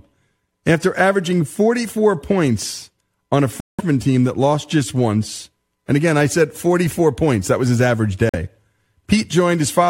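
At 3.60 to 3.81 s, after "points on a", and again at 8.29 to 8.36 s, after "that was his average", corrupt frame muted drops the audio into abrupt dead silence lasting 0.21 s and 0.06 s. These lengths suggest several whole decoder frames were rejected and blanked. Unlike concealment, nothing is smoothed over, and the timing stays intact.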